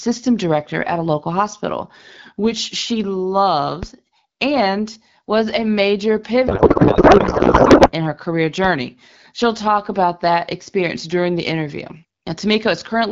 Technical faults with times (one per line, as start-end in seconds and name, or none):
3.83 DC step
6.47-7.92 codec payload misread